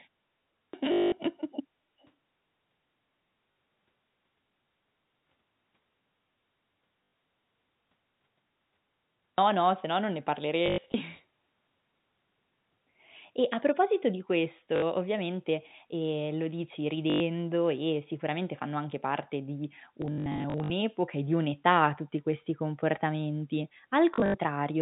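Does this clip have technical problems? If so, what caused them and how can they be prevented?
Yes, three kinds of fault show up here.

Clipped start after a pause: at 0.60 s and again at 9.26 s, the sound comes in abruptly with its beginning missing, about 134 ms gone the first time and about 120 ms the second. Both follow silence, 0.6 s at the very start and a long 7.65 s gap before the second. The playback device seems to drop into a sleep state during quiet and doesn't wake fast enough to catch the first sounds. To prevent it, keep the output stream open with a low-level keep-alive, or turn off the device's power saving.

Packet loss with last packet repeated: this is the main problem, heard at 0.92–1.12 s, 3.52–3.56 s, 7.04–7.12 s, 10.66–10.94 s, 14.76–14.82 s, 17.1–17.2 s, 20.02–20.7 s and 24.14–24.34 s. Each drop is covered by replaying the last packet. The loop doesn't line up with the pitch, and the runs turn into a short robotic buzz around 50 Hz, which fits 20 ms packets. 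The worst stretches are the 200 ms block near 1 s and the patchy 680 ms spell around 20 s, where about 360 ms is lost in scattered runs. To prevent it, fix the network path or use a jitter buffer with proper loss concealment or forward error correction.

Echo leak: at 2.0–2.1 s a faint delayed copy of the speech comes back about 341 ms late, very quiet at roughly 35 dB below the talker. That points to a loudspeaker at the other end, likely with an echo canceller that didn't fully remove what its microphone picked up. To prevent it, use a headset at that end, or improve the echo canceller's tuning.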